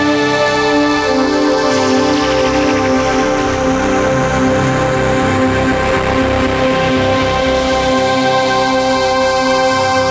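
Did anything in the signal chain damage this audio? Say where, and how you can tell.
Yes, there's hard clipping right through the clip, from a gain stage or converter pushed about 10 dB past its ceiling. Around a tenth of the samples get sliced flat, so every loud moment turns into harsh fuzz, even within the call processing's 8 kHz band.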